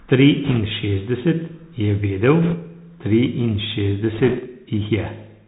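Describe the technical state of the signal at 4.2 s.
At 4.2 s the speech sits inside a burst of bit errors on a Bluetooth voice link, running from about 4.14 to 4.40 s. Flipped bits in the one-bit CVSD stream each nudge the waveform in the wrong direction before the decoder recovers, so instead of sharp clicks the sound gains a rushing, crackly noise laid over the speech. The density fits an error rate of a couple of percent. On a spectrogram this shows as a raised, speckled noise floor across the band for that quarter second. The waveform looks fuzzed rather than spiked.

Underneath, the whole clip passes through the Bluetooth CVSD headset codec, and its damage is plainly audible here too. The signal is a string of up-or-down steps whose size adapts, which fits a 64 kbit/s one-bit-per-sample stream. Nothing above 4 kHz survives, s sounds are scratchy, and a granular hiss runs under the speech. 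On a spectrogram there is a hard ceiling at 4 kHz with grainy texture below it. The waveform shows small staircase steps and slope-limited, rounded peaks on loud, fast transients.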